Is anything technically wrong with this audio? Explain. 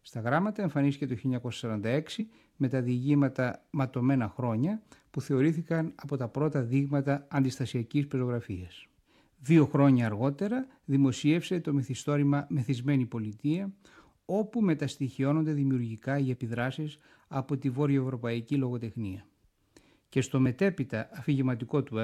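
Yes. Compressed frames skipped at 2.20–2.22 s, 16.34–16.36 s and 20.46 s: damaged or missing frames go unplayed, so the audio jumps ahead by roughly 50 ms, 20 ms and a few milliseconds.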